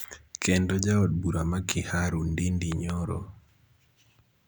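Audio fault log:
2.72–2.92 s, loud pop: two sharp pops about 15 dB over the speech, likely a voltage pulse; tall waveform spikes and vertical broadband streaks on the spectrogram.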